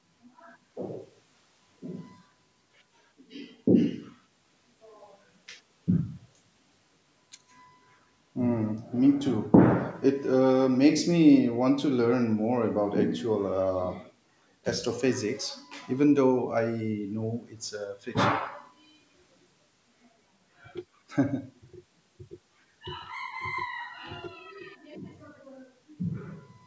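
No technical faults can be heard in this speech recording. It carries the sound of a call's microphone processing, with the lowest bass filtered away and nothing above 8 kHz, as that path normally produces.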